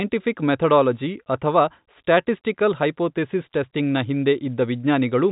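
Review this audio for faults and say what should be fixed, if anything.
Nothing here needs fixing: the speech carries the narrow band of G.711 telephone coding, with nothing above about 3.8 kHz and a faint quantisation hiss that rides along with the level, which fits ordinary 64 kbit/s mu-law and is simply how that telephone format sounds.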